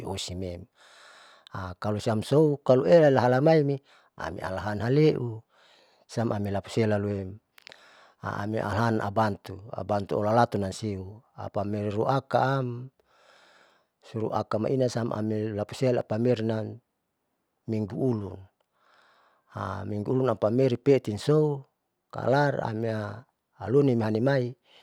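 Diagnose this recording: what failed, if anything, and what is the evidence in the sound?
No audible faults found.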